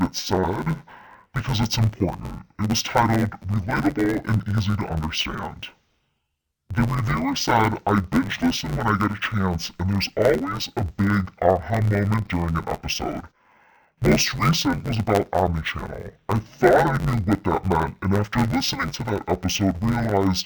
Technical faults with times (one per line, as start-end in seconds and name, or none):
0.00-20.45 interleaved audio read as planar